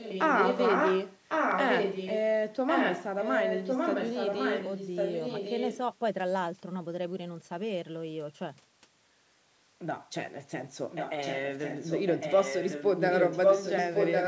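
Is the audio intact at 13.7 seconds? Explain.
No. An echo leak runs from 10.9 s to the end of the clip: a copy of the speech returns about 1.1 s late, roughly as loud as the original. This is likely a far-end loudspeaker whose echo canceller failed to remove the pickup.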